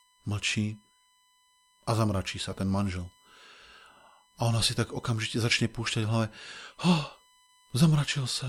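USB whine runs from start to finish under the speech: a steady, fixed-pitch tone at 1 kHz, sitting roughly 35 dB below the speech. It comes from the USB bus pulling current in bursts once every millisecond. Those 1 ms frames put a ripple on the shared power or ground line, and the ripple leaks into the audio path. It is heard as a thin, constant whistle that stays put while the speech moves around it.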